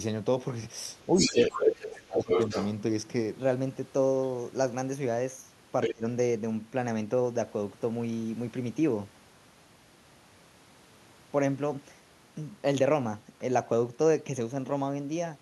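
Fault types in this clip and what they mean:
Speech suppressed in double talk: at 1.16–2.3 s and 5.92–6.04 s the talker dips by up to about 30 dB, likely an echo canceller muting both sides.
Other side's voice leaking through: at 1.18–2.68 s and 5.82–5.94 s a second voice comes through at roughly the talker's level, likely loudspeaker echo the canceller missed.
Section at the wrong speed: from 3.37 s to the end the audio runs 1.12 times fast, about two semitones higher, likely playback on a mismatched clock.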